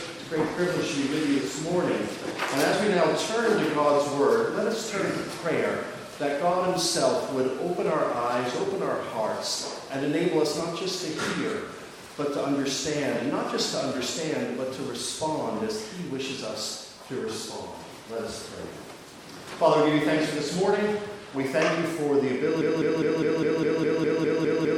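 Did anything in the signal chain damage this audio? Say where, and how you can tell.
Yes. A stall at the buffer or playback stage is the likely cause: the player, encoder or stream stopped getting new data and kept re-sending the last fragment it held. From 22.62 s to the end, a broken-record loop appears, with one 204 ms slice of sound repeating exactly, back to back, with no gap or variation. The tight, identical repeats point to a frozen buffer, and whatever should have played in those final seconds is gone.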